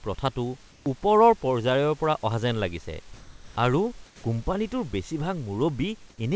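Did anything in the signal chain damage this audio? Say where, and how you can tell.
Yes. At 0.72–0.86, 3.14–3.56, 4.06–4.24 and 6.10–6.18 s the room background turns flat and featureless, shifting about 1 to 3 dB: likely comfort noise in place of the background, from discontinuous transmission in call processing.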